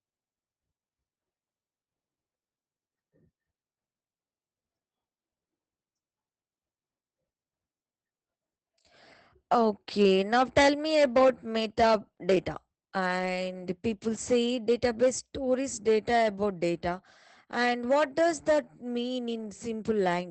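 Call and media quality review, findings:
Speech muffled, hoarse and slightly robotic throughout, nothing above 8.5 kHz. Probable component: Opus voice compression, SILK mode, wideband, 20 ms frames. Damage plainly audible and consistent with roughly 12 kbps: linear-prediction coder narrows the band to about 8 kHz and quantises the excitation coarsely, roughening the voiced sound.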